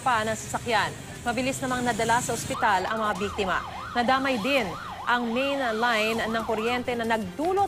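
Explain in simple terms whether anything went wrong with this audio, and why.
Nothing went wrong; no problems can be heard.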